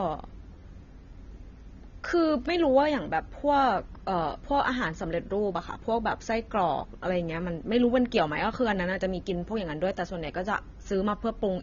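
Throughout the clip, the speech has nothing above 7.1 kHz and sounds dull and smeared, with a warbling, fizzy edge on sibilants. This is likely AAC compression at a low bitrate, around 24 kbps: the encoder drops the top band and coarsely quantises what remains.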